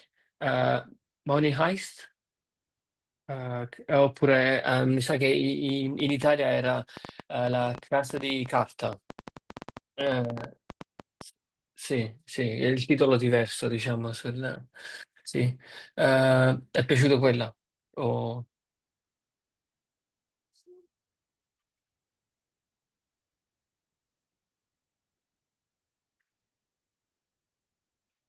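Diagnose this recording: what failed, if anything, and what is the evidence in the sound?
A train of clicks runs from 5.69 to 11.22 s: about forty similar pulses at an irregular 7.8 per second, peaking about 5 dB above the speech and ticking through pauses too. A spectrogram shows thin vertical broadband lines, and the waveform shows isolated spikes. Likely cause: interference coupling into the analogue wiring or a struggling interface.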